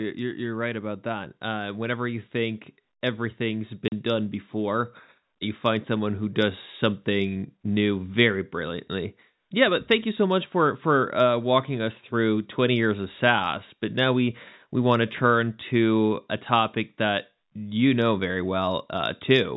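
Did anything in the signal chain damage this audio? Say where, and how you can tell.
Yes, in the network: packet loss filled with silence cuts a hard-edged 40 ms gap at 3.88–3.92 s. Its length fits two 20 ms packets, not an irregular buffer dropout.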